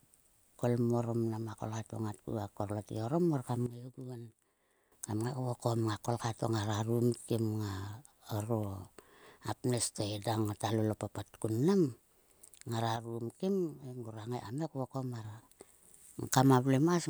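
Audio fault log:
3.66–4.92 s and 12.96–15.25 s, sudden gain jump: the speech and the background noise drop together, by about 12 dB in the first span and about 6 dB in the second, then return abruptly. This is likely a gain change applied between adjacent samples with no ramp. On the waveform, the envelope steps down and back up with vertical edges. On a spectrogram, every band dims uniformly across each span.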